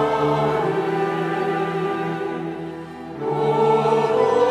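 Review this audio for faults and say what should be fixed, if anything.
Nothing here needs fixing; I listened all the way through and didn't catch a single glitch worth flagging.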